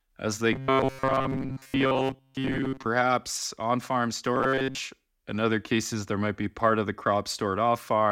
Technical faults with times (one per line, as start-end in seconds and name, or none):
0.53-2.86 robotic sound from repeated short buffers
4.36-4.78 robotic sound from repeated short buffers